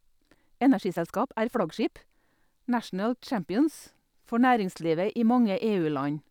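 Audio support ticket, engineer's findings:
Time-stretched section, 0.00 to 2.22 s. Likely cause: a length-fitting stretch in software, compressing this span to 1.35x speed by dropping short slices while holding pitch. Symptom: speech rushed, pitch unchanged, then an abrupt drop back to normal pace at 2.22 s.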